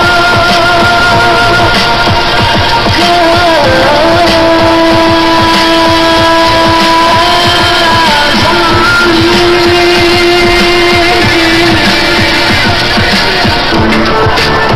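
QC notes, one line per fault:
Nothing to flag here, as I didn't hear any problems anywhere in the clip.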